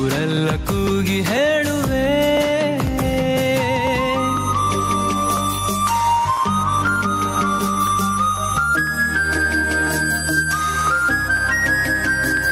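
Throughout the audio, the level pumps with a swing of around 10 dB, leaving loud and soft parts squashed close together. This gain pumping likely comes from gain set far too high, with a fast limiter clamping down on peaks.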